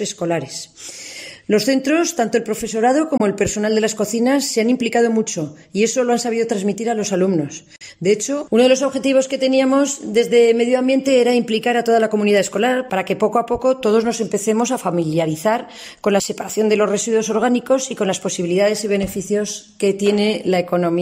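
Packets likely missed their delivery window to the headphones, a Bluetooth dropout: sound cuts to silence at 3.17 s for 21 ms and at 7.76 s for 43 ms, then resumes further along.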